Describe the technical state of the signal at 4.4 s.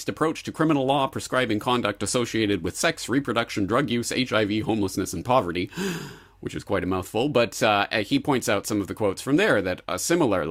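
At 4.4 s the speech signal is intact, with no dropout, clipping, distortion or other fault audible at that point.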